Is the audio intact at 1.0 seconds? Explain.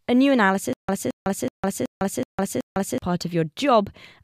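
No. At 1.0 seconds the speech sits inside a stutter with silent gaps that runs from 0.73 to 2.98 s. The likely cause is a stalled player or stream: each time it retried, it replayed the last 220 ms fragment and then ran dry for about 155 ms. The same burst comes back six times at an even 375 ms rhythm, separated by dead digital silence. Whatever speech belonged in that span is missing.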